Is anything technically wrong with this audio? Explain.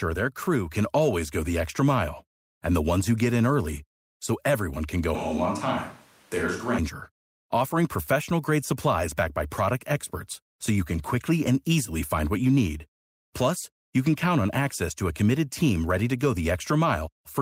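Yes. From 5.15 to 6.78 s, just after "so everyone can go", the speech suddenly turns roomy and hollow, with thinner bass and a faint room noise about 30 dB under the speech, then snaps back. This is a switch to a distant microphone, likely because the close microphone's signal dropped out and a farther one filled in. Level stays roughly the same. The abrupt change at both ends, rather than a gradual shift, separates it from added reverb or a tone-control change.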